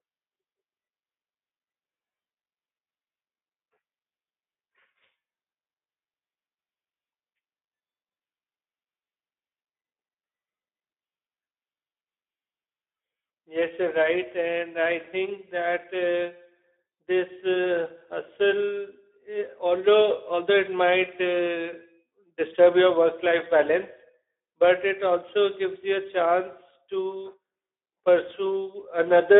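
A speech recording carries Speex codec damage from start to finish, plainly audible as a hoarse, grainy roughness laid over the voice. Speex is a CELP codec, and at a low setting it has too few bits to model the excitation signal well, so the voicing comes out noisy; the degree heard here fits a rate of around 11 kbps. The audio is also confined to a narrow telephone-style band of roughly 250 Hz to 3.6 kHz, with nothing above 3.8 kHz.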